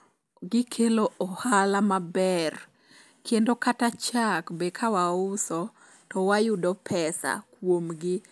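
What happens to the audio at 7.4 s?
Nothing goes wrong at 7.4 s; the speech plays through that moment intact, with no dropout, click or distortion.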